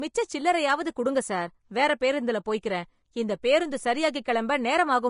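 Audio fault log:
Throughout, Vorbis compression: speech sounds hissy and grainy with smeared consonants and nothing above 10.5 kHz, likely from Vorbis coding near 35 kbps quantising treble coarsely.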